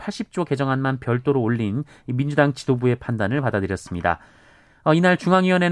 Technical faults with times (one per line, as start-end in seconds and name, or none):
none